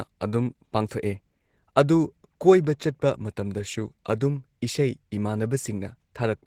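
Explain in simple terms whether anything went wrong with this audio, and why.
Opus voice compression affects the whole clip, from the first moment to the last. The speech was squeezed into a small amount of data with a voice codec that models the lower part of the sound as a predicted voice signal and adds a thin layer for the highest frequencies. With so little data, the fine texture of the voice is rebuilt only roughly, so the speech sounds plainly coarse, slightly hoarse and a little robotic throughout.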